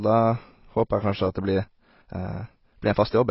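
A short speech recording with heavy damage from start to finish. The top end is cut off, so the sound is dull and muffled. Sibilants fizz and warble. This is likely AAC compression at a very low rate, which fits roughly 16 kbps AAC-LC. From 1.27 s to the end, the pace suddenly jumps to about 1.46 times normal speed while the pitch stays put. That stretch sounds rushed. A time-stretched section is the likely cause, with short pieces dropped to squeeze the timing.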